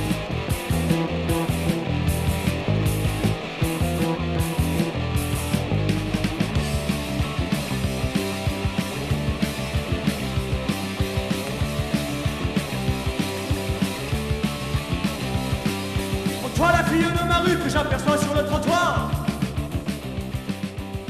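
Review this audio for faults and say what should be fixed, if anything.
Nothing here needs fixing, since no faults turned up anywhere in the recording.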